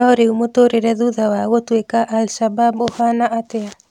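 Speech carrying sample clock jitter throughout: timing wobble of roughly a microsecond or two leaves a faint hiss about 45 dB below the signal. Unlike a steady noise floor, it swells on loud, bright sounds and vanishes in pauses.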